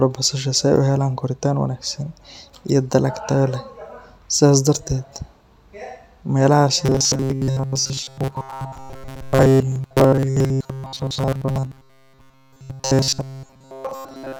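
From 6.86 s to 14.39 s, new audio is likely arriving too seldom, so the playback software keeps looping the last fragment of about 7.5 ms while the real speech is skipped. For roughly 70 percent of that stretch the sound is these repeats, and the result is robotic sound from repeated short buffers: a stiff, metallic buzz fixed at 133 Hz, one over the fragment length. It loosely tracks the speech.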